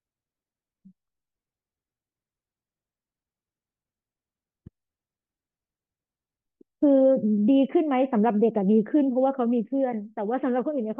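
There are no technical faults to describe in time order in this speech clip.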